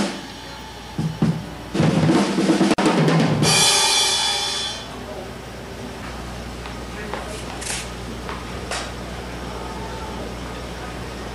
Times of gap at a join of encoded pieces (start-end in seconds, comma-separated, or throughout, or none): 2.74-2.78